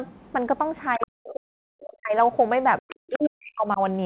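At 0.93 to 1.07 s a second voice slips in, about 10 dB under the main talker. That's likely the other side's voice leaking through, with the echo canceller missing some loudspeaker sound. Overlapping it, from 0.97 to 2.15 s, the talker dips, at worst by around 40 dB. It sounds like speech suppressed in double talk. The pattern repeats: a quieter leak, roughly 20 dB down, at 2.79 to 2.95 s, then the talker gets ducked again from 2.81 to 3.8 s. Underneath it all is the narrow, telephone-band sound of the call path, with nothing above 4 kHz.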